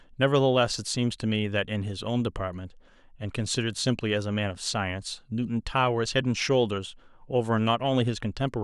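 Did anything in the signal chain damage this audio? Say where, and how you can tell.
No, nothing in the signal chain damaged this audio.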